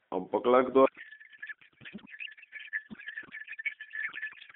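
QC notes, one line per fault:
0.86–4.56 s, codec payload misread: the receiver unpacks the AMR bits in the wrong layout, likely octet-aligned frames read as bandwidth-efficient, so the speech turns into garbled warble and noise.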